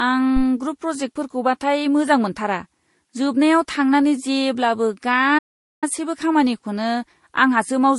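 A speech recording with a dull, smeared top end throughout, and two textures of compression damage sit on top of each other, with swirly, watery smearing over pre-echo and grainy roughness. This points to transcoding between lossy codecs, likely an MP3 pass at around 48 kbit/s re-encoded as Vorbis at around 39 kbit/s. The second encoder wastes its small bit budget reproducing the first encoder's errors and adds its own, and the lower cut-off carries through. At 5.38 s, right after "जोबनायाव थांनानै जेब्लाबो", the sound drops to silence mid-flow and resumes at 5.84 s, a gap of about 0.44 s. This is a playback stall, most likely the player's buffer running dry or its audio thread being blocked, so output halted until data arrived again.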